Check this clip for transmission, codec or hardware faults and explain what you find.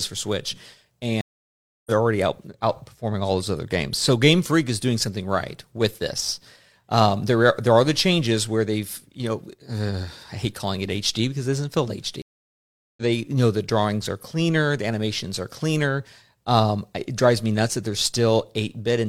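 The speech is interrupted twice by a stream reconnect. The first runs from 1.21 to 1.91 s, the second from 12.22 to 13.02 s. Each time the connection dropped and the player went silent, for 0.65 s and then 0.75 s. It then reconnected and started a fresh decoder mid-stream. The speech resumes roughly 0.7 s further on, so that stretch is simply missing. The restart is muted or softly faded for its first instant.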